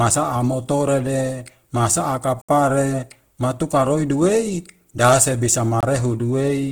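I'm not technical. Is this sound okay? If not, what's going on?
No. Two things are wrong.

The whole recording sounds rough and grainy, with a noisy, gritty edge on the speech. The damage is easy to hear. This is likely Opus compression, squeezed hard to make the file small. The format keeps the overall sound but fills in missing detail with noise, which leaves that sandy texture. It is not muffled, and the sound still reaches up to about 20 kHz.

There are also two blocks of digital silence. At 2.42 to 2.49 s, right after "motorede masaa", the sound drops out completely for about 70 ms. At 5.81 s, after "roi duwei dase bisa", it drops out again for about 23 ms. Each gap starts and stops with no fade, so you hear a small click or a quick hole. This points to the playback or recording program not delivering sound in time.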